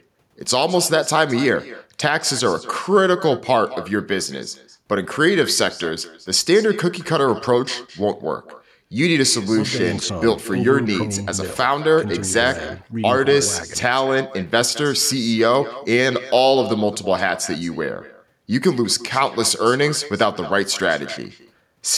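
From start to finish the speech carries echo with no canceller: the far end's loudspeaker feeds its microphone, returning each phrase roughly a fifth of a second later, about 17 dB quieter and thin. A spectrogram shows faint duplicate harmonic traces trailing every syllable.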